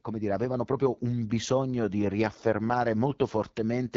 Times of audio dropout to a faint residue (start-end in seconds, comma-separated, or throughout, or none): none